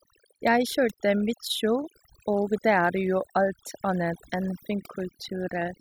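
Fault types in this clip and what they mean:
overdone noise removal: across the whole speech clip, an over-aggressive denoiser pushes individual frequency bands down or out whenever they sit close to its noise estimate. Gaps become near-silent with twinkling specks, and softer parts of the voice vanish too.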